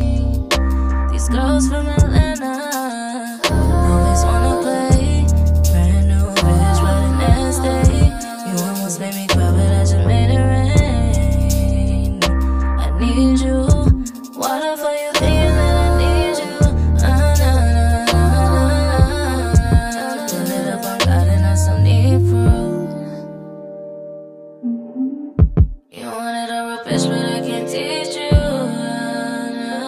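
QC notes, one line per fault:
Throughout, channel delay (comb filtering): one channel arrives roughly 10 ms late, and summing to mono cancels shared content at evenly spaced frequencies from around 40 Hz upward. These fixed notches give the sound a hollow, phasey colour.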